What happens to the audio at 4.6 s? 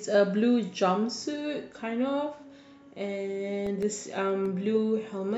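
At 4.6 s the speech carries CD scratch ticks, running 3.67 to 4.77 s. Eight brief ticks, about seven a second, mark each disc turn's unrecoverable, patched-over data.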